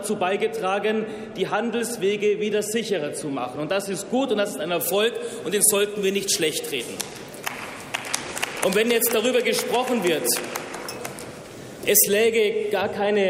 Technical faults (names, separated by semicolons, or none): pre-emphasis left on